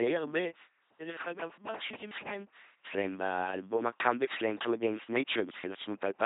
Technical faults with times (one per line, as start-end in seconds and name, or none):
0.00-6.26 LPC-10 vocoder